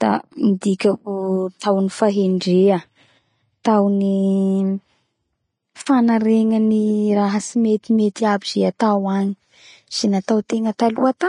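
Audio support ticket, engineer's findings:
Hissy, grainy treble and roughened tones throughout, with a lowered top end. Likely low-rate Vorbis compression (fits about 30 kbps) quantising the high-band residue into noise.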